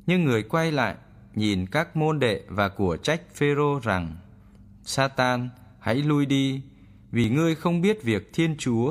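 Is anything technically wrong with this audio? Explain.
Yes. At about 7.24 s this speech clip has a tiny skip, just before "ngươi không". The cause is an overlap between stream segments. Two segments, which fits a 2-second segmenting, carried time stamps that overlapped. The player trimmed that overlap as if it were duplicated, but the sound was not doubled, so roughly 40 ms, up to 7.28 s, were lost. The waveform jumps across the gap.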